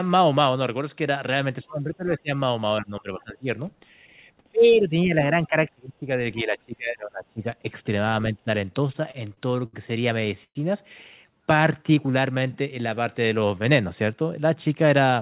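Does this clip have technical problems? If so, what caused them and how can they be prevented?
Yes. Speech suppressed in double talk occurs at 1.63–2.31 s, 2.81–3.58 s, 4.51–6.24 s and 6.43–7.75 s, with level dips of about 20 to 25 dB. The likely cause is an echo canceller that cannot separate near speech from loudspeaker echo and attenuates both. A double-talk-robust canceller with proper reference alignment prevents it.

Repeated stalls (stutter) appear at 8.88–9.76 s, with seven short gaps up to 71 ms, and at 10.21–10.58 s, with four gaps up to 114 ms. Late packets repeatedly emptied the jitter buffer, and the receiver stretched the last sound until data arrived. A more stable network path or larger buffer target prevents this.

A jitter buffer slow-down runs from 11.26 to 13.63 s. Playback falls to about 90% speed at unchanged pitch, adding roughly a quarter second as repeated pitch periods rebuild the buffer reserve. 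Reducing network delay variation prevents the buffer from draining and needing this refill.

The band stops at 4 kHz throughout, which fits a narrowband G.711 call path.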